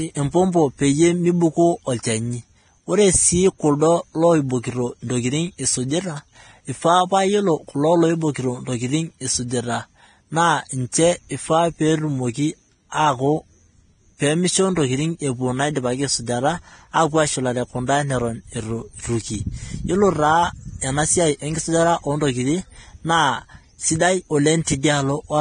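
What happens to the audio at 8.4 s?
At 8.4 s the speech carries the same damage heard across the whole clip, most likely Vorbis compression applied heavily, in a way that fits a low bitrate of around 24 kbps. Nothing survives above 9.7 kHz, and the treble just below that cut-off has been quantised so coarsely that its fine detail has turned into hissy, grainy noise. Tones sound roughened and consonant attacks blurred. A spectrogram shows a hard ceiling at 9.7 kHz with speckled, smeared upper bands instead of clean harmonic structure.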